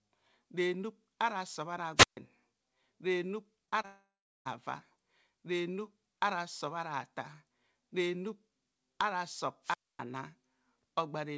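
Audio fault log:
1.96–2.17 s and 9.63–9.99 s, wireless microphone squelch dropout: the analogue FM radio link faded until the receiver's squelch shut the output. Each event is a brief swell of hiss, then a near-silent hole of about 0.14 s and 0.25 s, before the sound returns.
3.66–3.69 s, 3.69–3.74 s and 3.82–3.86 s, short concealed packet loss: three 20 ms chunks of the call never reached the decoder in time, so it extended the preceding sound to bridge each gap. The result is quick smears or wobbles rather than clean cuts.
3.86–4.47 s, long network dropout: about 0.6 s of audio went missing, likely a stall in the network stream. The receiver stretches the last sound into a fading buzz or hiss, then about 0.35 s of silence follows before the sound resumes past the lost stretch.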